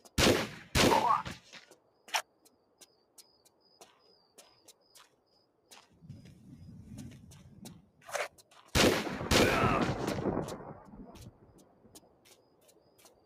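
A noise suppressor built for speech has been left running on this sound throughout, treating sustained tones and ambience as noise and swinging the level by around 20 dB, so the sound pumps, flutters or thins out rather than simply dropping out. The sound is cut by the noise suppressor at 1.70–2.08 s, 2.24–3.69 s, 3.93–4.38 s, 4.59–5.71 s, 8.30–8.51 s and from 11.31 s to the end, falling by about 8 to 9 dB. Unlike a gate or a dropout, onsets come through intact while held parts and decays sink.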